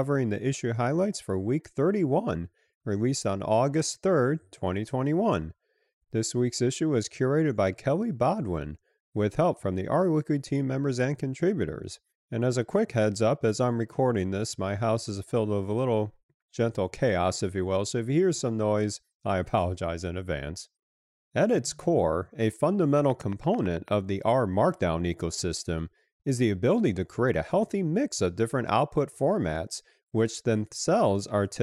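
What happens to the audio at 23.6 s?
A train of clicks runs through this moment, from 22.99 s to 23.89 s, between "its core a" and "of the". About ten near-identical pulses arrive at a steady 9 per second and peak at about the level of the speech itself, so they are heard as a distinct ticking laid over the sound. The likely cause is electrical interference or a faulty connection or power supply injecting a repeated pulse. What separates it from random crackle or a lone dropout pop is the even spacing and the matching shape of each click.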